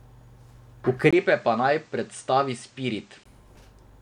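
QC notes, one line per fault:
1.11–3.26 s, input switched to a poorer device: a 20 ms gap at the switch, then duller sound with nothing above 9.1 kHz, about 5 dB quieter, over a new noise floor roughly 35 dB down, before it clears again. Likely a mid-recording change to another microphone.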